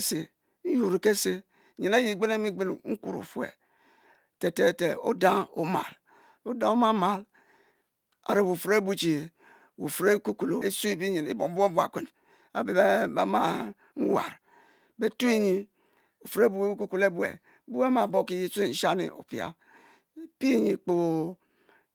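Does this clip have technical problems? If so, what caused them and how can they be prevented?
Yes. A skip ahead occurs at 10.61 s. About a second of speech is gone, and playback jumps forward with no gap. That stretch was dropped either in transit or by the jitter buffer when it overflowed. Sizing the buffer for the network's real jitter would prevent this.

Jitter buffer speed-up follows, from 10.85 to 14.39 s at 106 percent and from 14.93 to 15.40 s at 107 percent. The receiver removed short pitch-period pieces, about 240 milliseconds in total, so speech sounds hurried at unchanged pitch. Smoother packet delivery and gentler buffer adaptation would prevent it.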